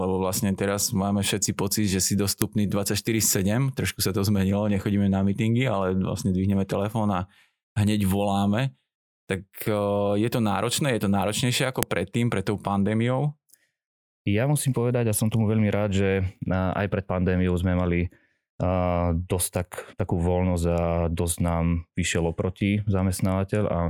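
A speech recording whose separate WAV pieces were joined without stripping their headers suffers from file header played as audio: the header bytes are reproduced as samples, producing a sharp, loud click at 2.42 s and again at 11.83 s, each marking where a new piece begins.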